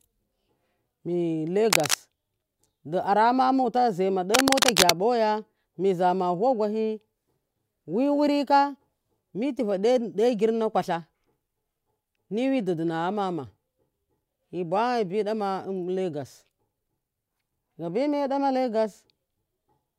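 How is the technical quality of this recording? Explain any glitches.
Two short bursts of cable scratch noise break into the speech. The first runs from 1.70 to 1.95 s. The second is longer, from 4.34 to 4.91 s. Each is a dense, ragged crackle at roughly the same level as the voice. The likely cause is a worn cable or connector being moved. Its contact resistance then shifts rapidly and unevenly. That adds irregular noise, heard as a brief scratching over the speech.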